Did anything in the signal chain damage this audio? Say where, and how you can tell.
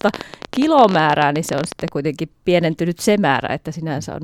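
Yes. A train of clicks runs from 0.01 to 1.89 s, about 16.6 per second at uneven spacing, around thirty similar pops peaking roughly 10 dB above the speech. Likely interference in the analogue wiring or interface.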